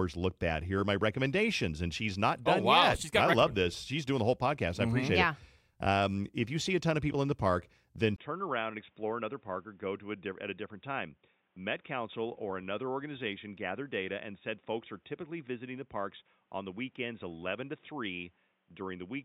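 From 8.16 s to the end, the speech turns dull and boxy, cut off above 3.8 kHz and slightly quieter after a brief gap: likely an input switched to a poorer device.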